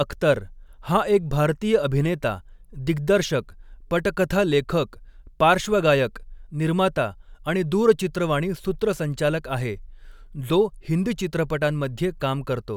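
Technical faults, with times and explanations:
No technical faults are audible in this speech.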